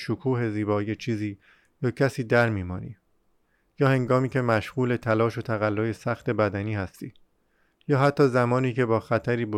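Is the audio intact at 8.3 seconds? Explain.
Yes, the speech at 8.3 seconds plays through intact, with no audible fault at that moment.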